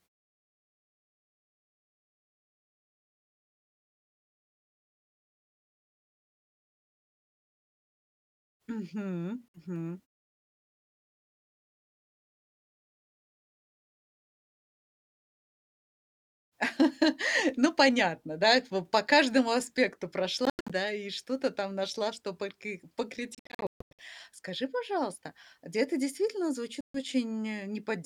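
The speech cuts to silence at 9.49 to 9.59 s, breaks into scattered gaps from 20.45 to 20.72 s and 23.35 to 24.02 s, and drops again at 26.81 to 26.98 s, resuming each time as if it had played on. This is a Bluetooth dropout, likely from packets arriving too late.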